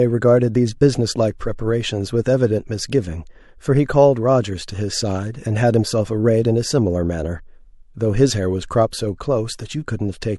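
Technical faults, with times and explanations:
8.91 s, pre-echo: a short hiss rises by about 15 dB for 15 ms just before a sharp speech onset, blurring its edge. The codec spread noise meant for the loud attack back across the whole block, which fits roughly 36 ms blocks without switching to short ones.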